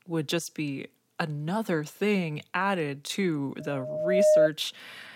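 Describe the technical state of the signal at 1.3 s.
At 1.3 s the speech signal is intact, with no audible technical fault at that moment.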